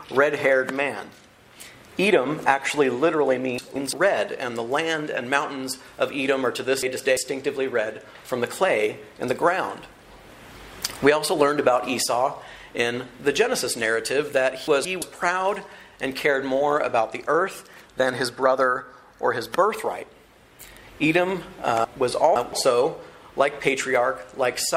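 Brief jumbled stretches break up the sound at 3.58–3.93 s, 6.83–7.17 s and 14.68–15.02 s, with a longer scramble at 21.85–22.53 s. These are chunks out of order: the audio moves in blocks of about 171 ms, and one block played a slot late in the first three spots and three slots late in the last. Nothing is missing, but the misplaced block creates hard joins.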